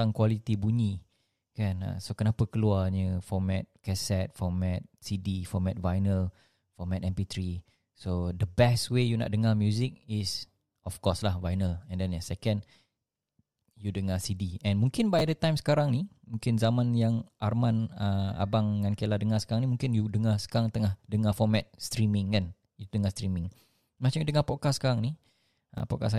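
A speech clip with chunks out of order at 15.19–15.21 s and 25.78–25.80 s. Each time, one 10 ms chunk plays one position late, so two chunks swap, giving a brief jumbled flicker. Unlike a dropout, no audio is missing.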